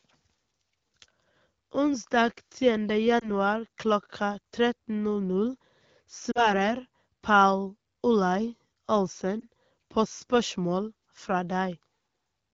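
At 3.19 to 3.29 s, 6.31 to 6.51 s and 9.40 to 9.45 s the speech suffers lost AMR speech frames. Corrupted radio frames failed their check, so the wideband decoder filled each gap by repeating its last good pitch and vocal tract settings at falling gain. The first and third sound like a brief warble or dip, fitting one lost frame. The middle gap is longer, fitting two, and briefly drops toward silence before the speech returns rough for a moment.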